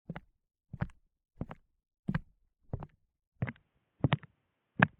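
At 3.42 s the sound abruptly turns dull and boxy, and it stays that way to the end of the clip. Nothing above about 3.8 kHz survives, so the air and crispness of the everyday sounds disappear. There is no gap at the change. The level shifts by a few decibels, and a faint new background noise appears far beneath the sound. This is likely an input switched to a poorer device partway through the recording.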